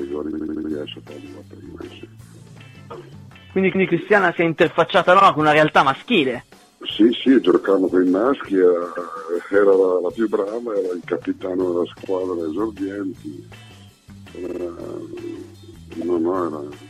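Repeated frames stutter the audio at 0.30, 3.72, 5.19, 7.51, 8.95, 12.03, 14.46 and 16.00 s: short compressed blocks replay, a 78 ms block five extra times at the start, 157 ms blocks once, and 52 ms blocks once or three times.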